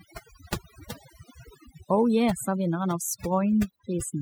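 From start to finish, overdone noise removal affects the speech. A suppressor set too hard has gated away individual frequency bands near its noise estimate, taking the quiet parts of the voice with them. The background drops and breaks up into twinkling specks. On a spectrogram, scattered isolated dots fill the gaps, and speech harmonics look patchy and eroded.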